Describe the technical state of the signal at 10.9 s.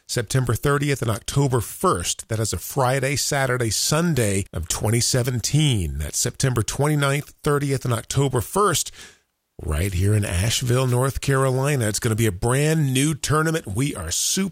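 At 10.87 to 10.94 s a wireless microphone noise hit occurs briefly: the radio link fades, receiver noise surges as a short swish, appearing as a broadband vertical smear.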